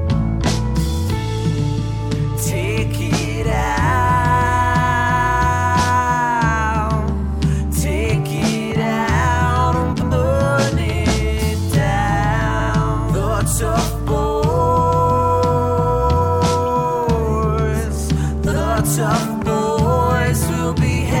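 Frames out of order at 9.92, 12.50, 18.47 and 20.88 s: swapped 93 or 46 ms blocks flutter, but unlike a dropout lose no time.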